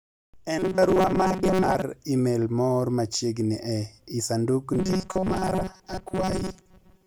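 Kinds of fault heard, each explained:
Robotic sound from repeated short buffers: audio likely arrived too seldom, so replayed short stretches replaced most of the speech, leaving a rigid metallic buzz at 188 Hz.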